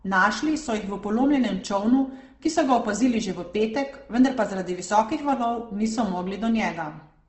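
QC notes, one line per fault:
Throughout: Opus compression. The speech sounds rough and grainy, with a noisy texture in place of clean tone, and nothing is heard above 8.2 kHz. This is likely Opus in its music mode near 16 kbps, filling starved bands with noise.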